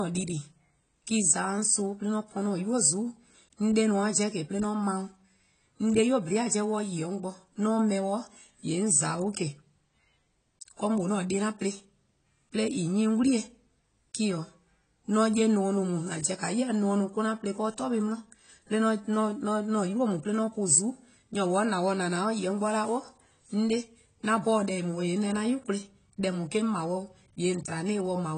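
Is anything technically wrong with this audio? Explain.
Yes. Throughout the speech, heavy AAC compression is likely, at a rate that points to roughly 24 kbps. The encoder quantises coarsely and discards everything above 9.3 kHz, so the audio sounds dull and plainly processed, and a spectrogram shows a flat, empty ceiling at 9.3 kHz.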